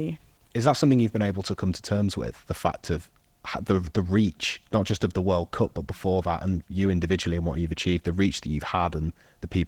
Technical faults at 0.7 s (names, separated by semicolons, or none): Opus voice compression